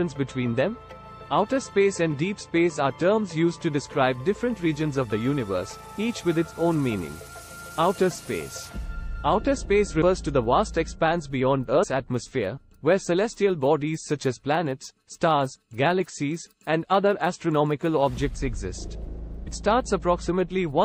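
Compressed frames skipped at 10.01 s and again at 11.82 to 11.84 s: the audio lurches forward by roughly a tenth of a second each time, which fits about four missing frames of 23.2 ms that the decoder never played. Because adjacent frames overlap, each join comes out as a short smeared blip, not a crisp click, and the material in between is simply gone.

Dropped samples at 12.19 s and 18.84 s: each is a single sharp click, a thin vertical line across the spectrum. The likely cause is a fraction of a millisecond of samples vanishing from the stream, so the waveform jumps abruptly to a later value. The gap is far too brief to remove audible content; only the discontinuity is heard.

Compressed frames skipped at 19.46 s: a larger jump of about 150 ms, consistent with around seven consecutive 23.2 ms frames missing or rejected as damaged. It again produces a soft, smeared blip at the seam.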